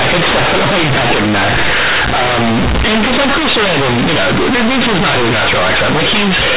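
Throughout, this is companded audio read as linear: A-law bytes play unexpanded as 8-bit samples, so even pauses fill with loud buzz. Clipping, by contrast, leaves quiet stretches clean.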